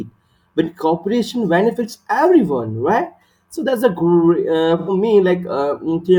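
At 4.79 s an AAC frame loss with concealment occurs. The decoder lost about 85 ms of data, which fits two missing frames, and rebuilt the gap from the preceding spectrum. Until 4.89 s, the speech becomes a brief smeared patch.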